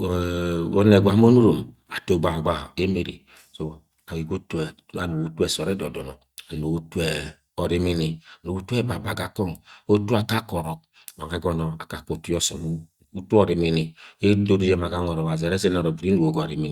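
No technical faults are audible anywhere in this speech.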